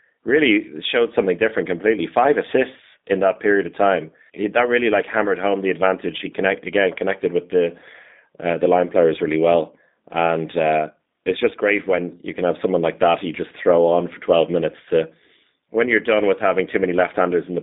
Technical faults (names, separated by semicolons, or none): G.729 codec